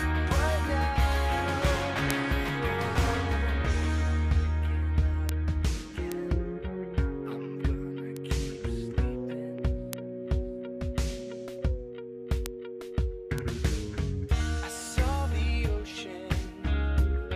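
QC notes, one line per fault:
2.11 to 13.38 s, bit error spikes: seven isolated ticks at 2.11, 5.29, 6.12, 8.17, 9.93, 12.46 and 13.38 s, peaking between about -16 and -4 dBFS, loudest at 2.11 and 9.93 s. Each is consistent with a single flipped bit in one or two adjacent samples, so the value leaps by a power of two and snaps straight back. That near-instant excursion carries energy across the whole spectrum, giving a sharp click unrelated to the surrounding audio.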